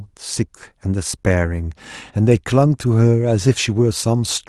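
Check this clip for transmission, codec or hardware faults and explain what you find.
No transmission, codec or hardware faults.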